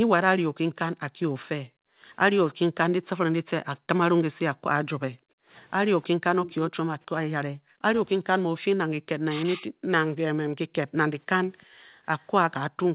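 From 1.63 to 2.02 s and again from 3.78 to 4.65 s, the background is gated by the echo canceller. While the far end plays through the loudspeaker, the canceller turns the microphone down hard, by about 40 dB, so the room tone drops out and then returns. In the second span this happens in patches that add up to a fifth of a second or so. On a waveform the low noise floor falls almost to silence. On a spectrogram the broadband haze goes blank in those spans, and the band stays capped at 4 kHz throughout, as a narrowband call path would.

At 5.33 to 5.39 s there is a brief cut in the speech, a dip of around 40 dB lasting a few hundredths of a second. This is speech suppressed in double talk: both sides were likely talking at once, and the canceller could not separate the talker from the loudspeaker echo, so it turned both down. It shows as a small notch in the waveform envelope and a thin vertical gap across the harmonics.

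From 6.02 to 6.72 s an echo leak puts a faint copy of the voice 313 ms behind the original, about 15 dB down. The likely cause is a loudspeaker at one end whose canceller did not remove everything its microphone picked up. It sounds like a repeat trailing the speech. On a spectrogram the harmonic pattern reappears a third of a second later at lower intensity.

The double-talk suppression returns from 7.6 to 7.89 s and from 9.04 to 9.67 s, each a drop of around 40 dB. The first span loses a few tenths of a second and the second a bit more, heard as dips and chopped pieces of speech. The waveform envelope shows ragged troughs there, and the spectrogram shows harmonics fading or breaking into fragments.

From 11.58 to 12.2 s the echo leak recurs at the same 313 ms delay, now very faint, about 35 dB below the speech, so it shows only as a ghostly trace on the spectrogram. Inside that span, from 11.66 to 11.82 s, the background is gated again by about 40 dB, a short blank in the noise floor.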